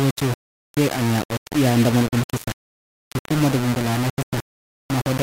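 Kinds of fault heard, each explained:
Low bit depth without dither: the speech sounds coarse and grainy all the way through, with a crunchy distortion that tracks the voice and sits only about 10 dB below it. Quieter stretches sputter or drop out. It's likely just 3 bits, rounded with no dither.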